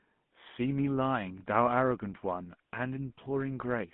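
Speech carried through a GSM full-rate codec for its whole length, its damage consistent with a 13 kbps rate. The codec rebuilds the voice from spaced excitation pulses, leaving a plainly audible buzzy, gravelly roughness, and the line passes only about 150 Hz to 3.5 kHz.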